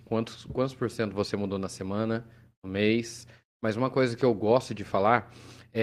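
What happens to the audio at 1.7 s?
Nothing goes wrong at 1.7 s: the speech there plays through cleanly, with no dropout, click, distortion or other fault at that moment.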